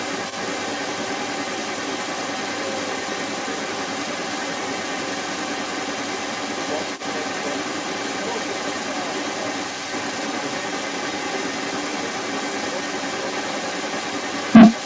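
From 0.0 s to the end of the speech, a second voice runs alongside the main talker. It is the other side's voice leaking through. It sits strongly in the mix, roughly 10 dB above the main speech. The likely cause is an echo canceller that failed to remove the far side's loudspeaker sound from the microphone. Nothing is heard above 8 kHz, which fits a wideband call codec such as G.722.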